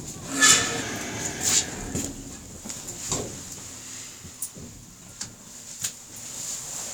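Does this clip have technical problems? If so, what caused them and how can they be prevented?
Yes. From 0.82 to 1.40 s the sound slows by about 6% and drops 108 cents, a little over a semitone, then snaps back to normal pitch. This is likely a drift correction step, where clock-matching software changed the playback rate in one jump to rebalance its buffer. On a spectrogram, every partial steps down together for that stretch and returns abruptly. The waveform shows correspondingly longer cycles. Smooth, gradual resampling correction would prevent it.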